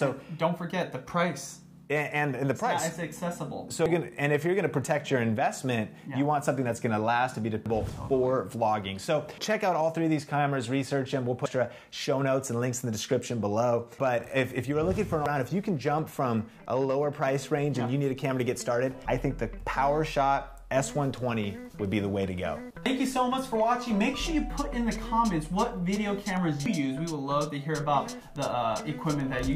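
Audio missing between chunks is heard at 3.86, 7.66, 11.46, 15.26, 19.06, 22.86 and 26.66 s. At each point, about a fifth of a second of sound drops out and the two sides butt together with no gap, producing a skip every 3.8 s. The likely cause is a recorder or processor working in 4-second chunks that loses a short stretch each time it closes one chunk and opens the next.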